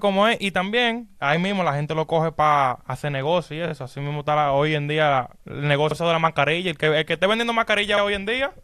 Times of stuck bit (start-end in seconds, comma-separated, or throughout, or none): none